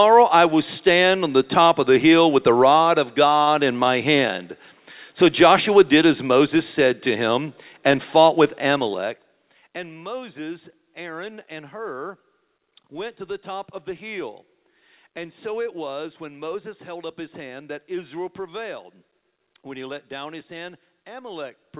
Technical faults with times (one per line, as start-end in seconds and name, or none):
3.42-3.49 short stall from a late packet